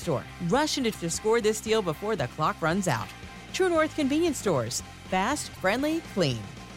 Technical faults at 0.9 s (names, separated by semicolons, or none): damaged data in a compressed stream